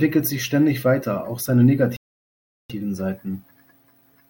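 Starting at 1.96 s, the player likely ran short of buffered data or had its output thread blocked, causing a playback stall that lasts until 2.70 s. The speech cuts off abruptly mid-flow and the output goes completely silent for 0.73 s before sound returns.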